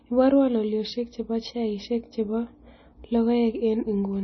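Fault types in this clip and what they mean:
MP3 compression: The speech has nothing above 5.9 kHz, so it sounds dull and band-limited, and the damage throughout is heavy. This is likely MP3 encoding at a very low rate, around 24 kbps. When an MP3 encoder runs short of bits, it cuts the treble at a fixed frequency and discards weak spectral detail, which switches on and off from frame to frame and gives the audio a watery, smeared character.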